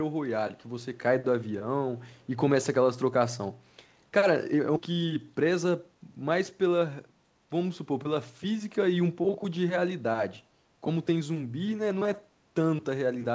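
From 2.15 to 2.27 s, a very faint delayed copy of the speech appears, trailing the original by about 0.42 s. It sits far below the main signal and lasts only a brief scrap. This is most likely an echo leak. One end played the call on a loudspeaker, and its echo canceller left a remnant of what the microphone picked up. That remnant travelled back down the line.

At 4.76 to 4.78 s, the audio makes a skip ahead. Around 0.4 s of material is simply gone. Nothing fills the hole, so the sound before and after the jump is butted together almost directly. Later audio was already queued, and the missing stretch was dropped, either in transit or by an overfull jitter buffer. The result is an abrupt forward jolt in the speech.

From 4.90 to 6.82 s, a jitter buffer speed-up follows. The buffer was holding more audio than it wanted. To shrink the delay, the receiver trimmed many short pitch-period pieces in succession, about 150 ms in total. 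Playback runs at roughly 108% speed over this span. Pitch stays the same, but the speech sounds slightly rushed. The whole clip passed through the G.722 call path, which leaves nothing above 8 kHz.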